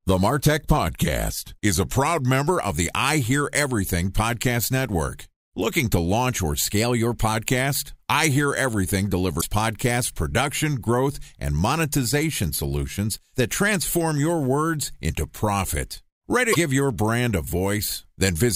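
A drift correction step runs from 0.77 to 2.49 s: the speech slows by 5.74% and drops 102 cents, about a semitone, then snaps back to normal. A second drift correction step, from 6.65 to 7.33 s, speeds the speech up by 5.74% and raises it 96.6 cents. Speed and pitch move together in both, which points to a resampling rate being switched in a single step. The likely cause is clock-matching software refilling, then draining, its buffer.

Damaged data in a compressed stream appears at 9.37 to 9.44 s and again at 16.51 to 16.56 s. Each lasts about 60 ms and is heard as a brief glitch in the speech. The decoder met frames it could not read correctly, produced garbage for them, and then lost sync until it found the next valid frame header.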